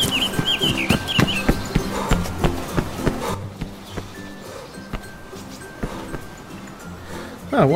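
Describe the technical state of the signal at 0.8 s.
At 0.8 s the audio is intact, with no dropout, distortion, glitch or other audible fault.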